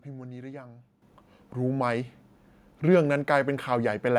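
At 1.02 s the speech and background jump up together by about 10 dB, a microphone volume step-up where the call software raised the input level at once.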